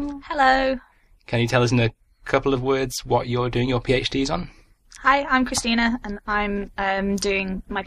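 No faults found; nothing in the signal path calls for attention.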